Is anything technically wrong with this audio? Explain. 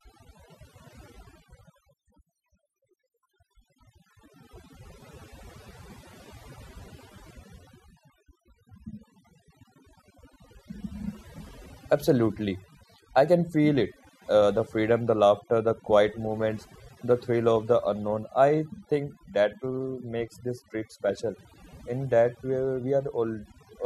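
Yes: overdone noise removal runs throughout this speech. Bands near the noise estimate get cut away, so the background drops to twinkly near-silence.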